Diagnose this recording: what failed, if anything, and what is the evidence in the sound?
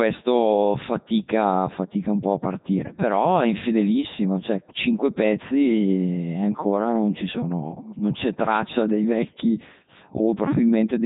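The codec stage is the culprit here: the whole clip has been through the Codec 2 vocoder, and it sounds it. The speech is robotic and buzzy from start to finish, with nothing at all above 3.8 kHz and heavy damage throughout, which fits the top 3.2 kbit/s mode. The decoder isn't rebuilding the original waveform. It's resynthesising the voice from sine waves driven by pitch, voicing, energy and a rough spectral envelope.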